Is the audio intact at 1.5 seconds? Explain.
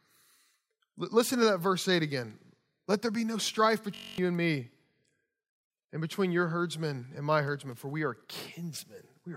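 Yes, the audio is intact at 1.5 seconds, with no audible fault at that moment.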